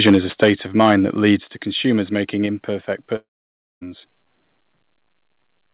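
Right from 0.06 to 0.96 s the loudest syllables crackle and rasp. That's microphone overload, likely an input set about 8 dB too hot, so a small share of peaks get their tops sheared off.

Partway through, at 0.44 s, everything drops about 3 dB at once, voice and background together. That's the microphone volume stepped down, likely the call software cutting input gain in one step.

There's a milder crunch from 1.24 to 1.31 s, about 1 dB over. Then at 1.44 s, just before "to consumers making", the level falls another 5 dB or so. After "to consumers making", at 2.46 s, it steps down about 3 dB once more.

From 3.16 to 3.83 s there's a long network dropout. The last sound smears into a fading buzz, then it's essentially silent for over half a second before the speech picks up again, with roughly two-thirds of a second of audio lost for good. Throughout, the sound is band-limited to nothing above 4 kHz, which fits a narrowband G.711 call path.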